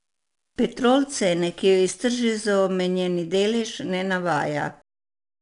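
Speech carries plainly audible 4-bit ADPCM compression throughout: a gritty hiss rises and falls with each loud syllable, and sharp onsets distort as the adaptive step lags. Unlike plain bit reduction, the noise follows the level. Nothing sounds above 10.6 kHz, which fits roughly 88 kbps.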